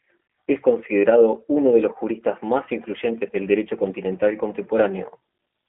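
From start to finish the speech carries the sound of the G.729 codec, here the G.729A variant, at what sounds like 8 kbit/s. The band is confined to roughly 250 Hz to 3.5 kHz, and nothing above 3.6 kHz survives, so sibilants lose their edge. Each short frame is rebuilt from a vocal tract filter, a pitch predictor and a few pulses, which leaves the speech plainly rough and synthetic.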